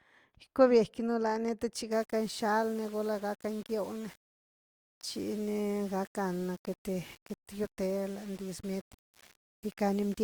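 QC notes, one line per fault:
1.92–10.24 s: low bit depth without dither. Speech turns grainy, and the grit follows the sound. It is likely undithered rounding to about 7 bits, with error around 25 dB below the signal.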